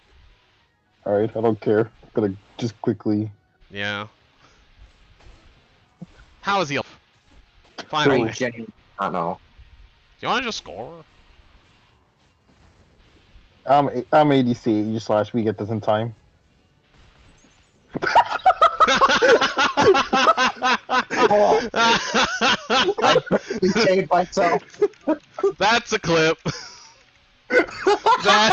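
At 6.81 s roughly 0.4 s of waiting audio was dropped, a skip ahead, so the sound jumps forward and the two sides join almost directly. From 6.92 to 8.75 s a jitter buffer speed-up trims short pitch-period pieces to cut the built-up delay, running the audio at 112% speed with unchanged pitch. About a fifth of a second is removed, and the stretch sounds hurried. Throughout, the Opus call codec limits the bandwidth to 8 kHz.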